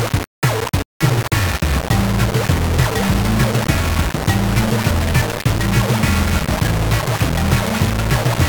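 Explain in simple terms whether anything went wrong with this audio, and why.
Grainy, gritty distortion runs through the whole clip and shifts with the sound. The likely cause is low bit depth without dither: only 3 bits, plainly rounded.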